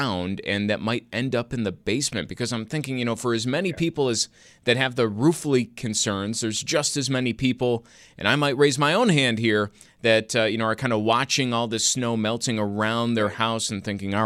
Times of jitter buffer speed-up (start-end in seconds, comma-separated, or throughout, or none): none